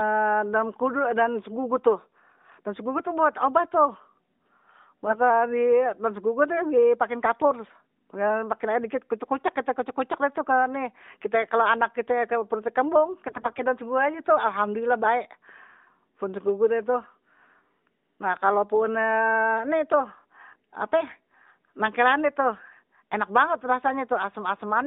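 At 5.06 s, for about 0.12 s, and again from 13.28 to 13.64 s, between "anak kit perutnye kembung" and "daun segugu aje tuh", the speech turns scratchy and gargly. These are AMR bit errors. Flipped low-priority bits misplace the excitation pulses and throw off fine pitch, gain and spectrum values, so pitch and level hold while the texture roughens. The second burst is longer and harsher.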